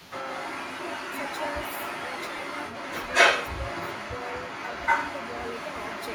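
Speech recording with two faults. A delayed copy of the voice trails it by 229 ms throughout, at roughly 5 dB relative to the speech. This is echo leak, likely from a loudspeaker echo canceller letting its pickup through. From 0.0 to 0.12 s the opening sound dips by roughly 15 dB. That is speech suppressed in double talk, likely while the canceller clamped down on overlapping signals.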